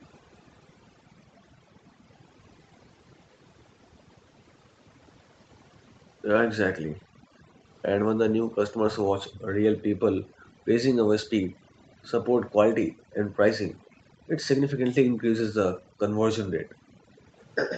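Overdone noise removal runs throughout: the suppressor cuts bands near its noise estimate too deeply, leaving a near-silent, twinkling background. From 0.12 to 0.86 s, a faint delayed copy of the speech trails it by about 0.48 s. This is an echo leak, likely residual far-end audio that slipped past the echo canceller. The copy returns from 11.79 to 13.9 s and from 16.66 s to the end, growing louder each time. Between 6.92 and 9.5 s, and again between 15.79 and 17.24 s, the background is gated by the echo canceller. Room sound drops by as much as about 40 dB, for roughly a second in total in the first span and under a second in the second.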